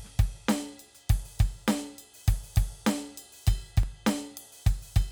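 At 3.83 s the waveform's zero line jumps by about −27 dBFS, a DC step that a 20 Hz high-pass drains away, so the music carries a single low thump.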